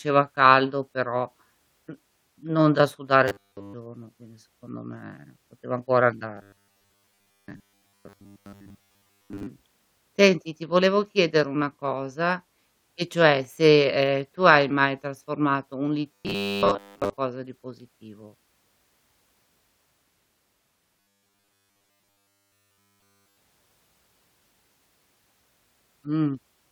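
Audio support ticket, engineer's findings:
Robotic sound from repeated short buffers at 3.28–3.74 s, 6.35–9.48 s, 16.12–17.17 s and 21.0–23.37 s. The speech turns into a rigid metallic buzz at 100 Hz that still loosely tracks the words. The buzz covers essentially all of the first and last spans and most of the middle two. Likely cause is audio arriving too seldom, so roughly 10 ms chunks are replayed while the real audio is skipped. That repeat period sets the pitch.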